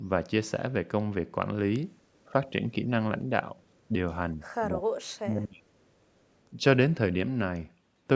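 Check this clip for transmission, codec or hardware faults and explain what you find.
Speech suppressed in double talk at 2.26–2.53, 2.71–2.89, 3.88–3.94, 4.33–4.41, 4.67–5.67 and 6.50–6.63 s: the echo canceller, likely confusing this talker with returning echo, ducks the speech by about 5 to 10 dB, and by up to about 35 dB within the full second at 4.67 s.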